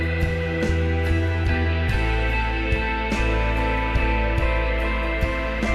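No technical faults are audible.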